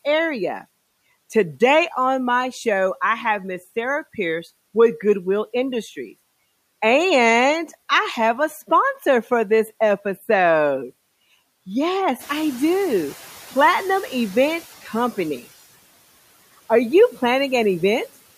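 From 12.19 to 14.68 s the background noise swells, then sinks by about 8 dB: the noise suppressor catching up after a sudden rise.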